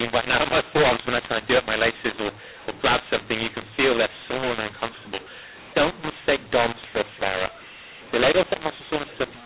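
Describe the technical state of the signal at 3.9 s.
At 3.9 s the speech sounds harsh and gritty, with loudness jumping unevenly and a hiss where near-silence should be. That sound persists across the whole clip, not just this moment. It is a mu-law and A-law mix-up: the 8 kHz G.711 telephone stream was coded with A-law but decoded as mu-law. Each 8-bit code therefore maps to the wrong level, scrambling amplitudes and lifting the quietest samples well above silence.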